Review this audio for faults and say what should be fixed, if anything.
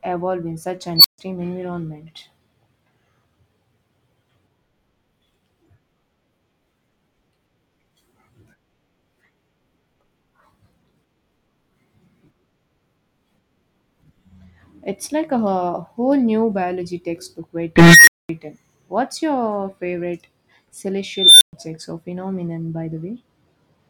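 Squealing tones swell to clipping, then drop to silence: an unstable filter. A recursive filter with bad coefficients runs away until it overflows and resets. This happens at 0.96–1.18 s after "evolve in such" (around 4 kHz, 83 ms rise, 140 ms silence), at 17.76–18.29 s after "whole new biology textbook" (around 2 kHz, 313 ms rise, 220 ms silence), and at 21.14–21.53 s before "or phenomenon by" (around 4 kHz, 272 ms rise, 120 ms silence). Keep filter poles inside the unit circle and validate coefficients before applying them.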